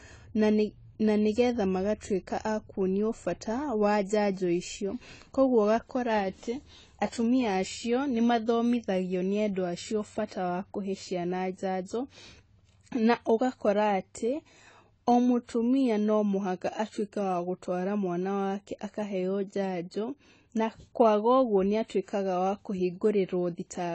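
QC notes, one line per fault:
throughout, AAC compression: The speech sounds dull and smeared, with a watery, warbling texture on sustained sounds and a fizzy edge on sibilants. Nothing is heard above 9.4 kHz, so the top octave of air is simply missing. This is likely a low-bitrate AAC-LC encode, which fits roughly 24 kbps. At that rate the encoder drops the high band entirely and quantises the rest coarsely, and the resulting noise and band holes shift from frame to frame.
10.27–10.31 s, pre-echo: A hiss rises for about 40 ms just before "wa kuhe ciana njanjo", and the onset sounds softened rather than crisp. The transform frame holding that attack spreads its quantisation noise across its whole length. The noise level is set by the loud onset, so it also fills the near-silent stretch ahead of it. With nothing there to mask it, that noise becomes audible as a brief smear before the sound begins.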